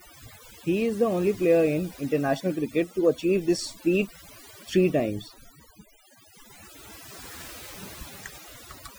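Speech, and the whole clip suffers from overdone noise removal. Someone pushed a noise reducer far too hard on a noisy take, so any frequency band sitting near its noise estimate gets pulled way down or shut off entirely. That strips out the softer parts of the voice along with the noise. You end up with a background that drops away and breaks up into little twinkling specks.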